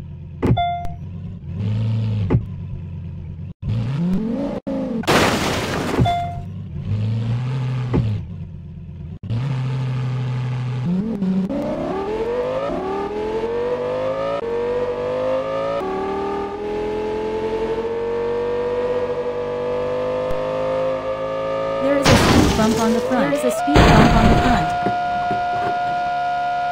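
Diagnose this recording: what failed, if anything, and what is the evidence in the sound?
DC step at 0.85 s, 4.14 s and 20.31 s, each a low thump as the waveform's zero line jumps by about -16 dBFS (about -15 dBFS at 20.31 s) at the converter or analogue input, then drains away through a roughly 5 Hz high-pass while the sound continues unaffected.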